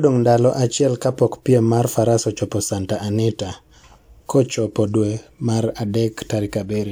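Nothing stood out as a technical fault on listening to this speech recording.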